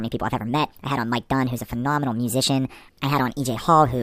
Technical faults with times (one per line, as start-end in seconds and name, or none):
0.00-4.03 wrong sample rate